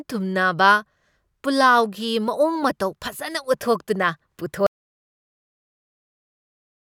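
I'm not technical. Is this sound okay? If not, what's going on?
No. At 4.67 s the speech suddenly stops, and from there to the end there is total silence. This is an audio dropout to silence. It isn't a quiet pause. Even the background sound of the room disappears. That points to the sound input being lost, likely a disconnected device, a dropped link or an accidental mute, while the recording carried on saving silence. Whatever was said after that moment is missing.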